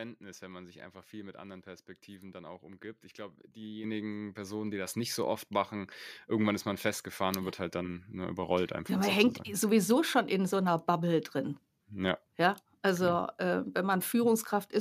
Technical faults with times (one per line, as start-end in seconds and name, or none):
3.84 microphone volume stepped up
4.86 microphone volume stepped up